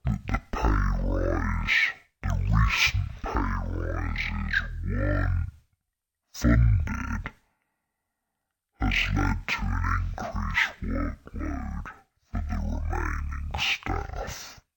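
Throughout, stereo is read as mono: the alternating left and right samples are taken one after another as a single channel. The speech therefore runs at half speed and sits a full octave low, with a faint mirrored image in the upper half of the spectrum.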